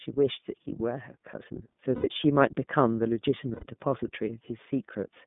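iLBC codec coding is present from start to finish of this speech. The band runs only from about 150 Hz to 3.6 kHz, so the top end is gone and the voice sounds thin and boxed in. Each 30 ms frame has its excitation coded on its own, and at this rate, which fits iLBC's 13.33 kbps mode, the simplification is plainly audible: the voice comes across slightly rough, grainy and synthetic.

Lost iLBC frames appear at 1.95 to 2.07 s and again at 3.54 to 3.64 s, each gap lasting about 90 ms, which matches three missing 30 ms frames. With nothing received, the decoder fills the hole by repeating the last pitch period with added noise. Each gap comes out as a briefly held, buzzy, slightly breathy vowel. Because iLBC frames do not depend on earlier ones, the speech snaps back to normal clarity as soon as packets resume.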